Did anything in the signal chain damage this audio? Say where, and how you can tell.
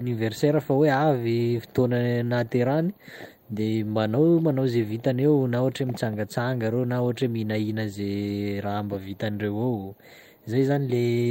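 No, nothing in this signal chain damaged the recording.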